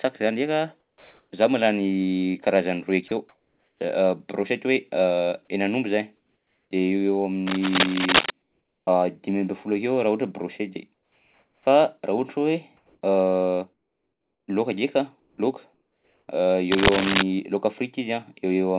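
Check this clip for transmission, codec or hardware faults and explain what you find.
Three kinds of fault appear in this speech: comfort noise in the pauses, a short dropout from the voice detector, and cable scratching. The call path's band limit is also audible. Nothing is heard above 4 kHz, which fits a narrowband G.711 codec.

Comfort noise in place of the background occurs at 0.8–1.31 s, 3.08–3.8 s (after "karazany roy"), 6.17–6.71 s, 8.42–8.87 s, 10.94–11.66 s (after "akeo raha ohatra brochety") and 12.77–16.28 s. The real room tone gives way to steady, featureless hiss, sometimes about 3 to 6 dB quieter. This is likely discontinuous transmission, with the receiver synthesising noise during the pauses.

Sound dropped by the voice detector occurs at 3.08–3.11 s, right after "karazany roy". About 30 ms of sound is replaced by noise. The detector likely judged the sound to be background and stopped sending.

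Cable scratch noise occurs at 7.47–8.31 s and 16.71–17.23 s. Dense, uneven rustling bursts sit somewhat louder than the speech, likely from a worn cable or connector whose contact resistance fluctuated as it moved.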